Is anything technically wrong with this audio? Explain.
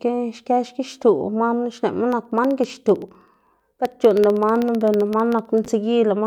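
Yes. From about 2.12 s to 5.65 s there are periodic USB or driver dropouts. Every 64 ms something stalls the USB bus or the audio driver, and a tiny sliver of audio, well under a millisecond, goes missing and is replaced by silence. Around fifty of these gaps land in the speech, and you hear them as a steady, fast ticking riding on the signal, roughly fifteen clicks a second.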